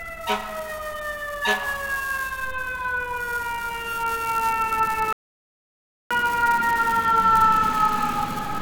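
A recording of everyday sounds drops out abruptly at 5.13 s and stays completely silent until 6.11 s, a gap of about 0.98 s, before picking up again. This is a playback stall: the output simply stops in mid-flow rather than fading. The likely cause is that the player ran out of buffered data, or had its playback thread blocked, so nothing reached the output until it recovered. From 6.11 s to the end of the clip, everything sounds hurried and slightly raised in pitch. This is catch-up at higher speed. The player is working through the backlog left by the stall by resampling it to run 1.1 times faster. Because resampling changes speed and pitch together, the sounds are also shifted up by roughly a semitone and a half. This raised, quickened playback continues all the way to the clip's end without settling back to normal.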